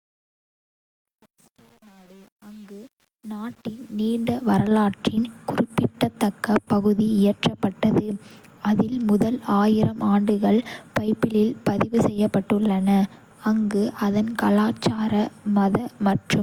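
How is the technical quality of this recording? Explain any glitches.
The recording has two problems: a coded texture through the whole speech clip, and a gritty opening where the level comes up.

Transcoding between lossy codecs runs from start to finish. The speech has a mix of artefacts that don't come from one coder, heard together, with nothing above 20.2 kHz. The likely cause is the audio going through HE-AAC and then Opus, each at roughly 48 kbit/s. The second codec wastes bits re-encoding the first one's damage and adds its own, so both sets of artefacts stack up.

Truncation distortion on a fade covers 0 to 4.52 s, and it's worst from 0 to 4.04 s. The quiet start of the fade sounds gritty. That fits a volume stage that kept only about 8 bits and added no dither. At low level the waveform only has a few coarse steps available, so it turns into squared-off chunks instead of a clean, quiet signal.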